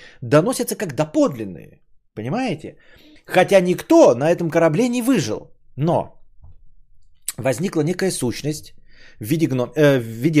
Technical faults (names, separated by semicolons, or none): drift correction step